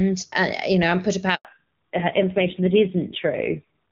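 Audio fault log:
1.35 to 1.45 s, handover gap: the speech fades out within a few tens of milliseconds and then there's a clean 100 ms of silence while the call hops networks. No frames got through during the switch, so whatever was said in that stretch is simply gone.
1.45 s to the end, fallback to narrowband: right after the gap the sound goes duller and rougher, with nothing left above 4 kHz. Before the handover it's crisp HD Voice wideband with hardly any codec damage, which fits a high AMR-WB rate around 23.85 kbit/s. The new link drops to an old narrowband codec instead, and the harshness points to a low AMR-NB rate around 5.9 kbit/s.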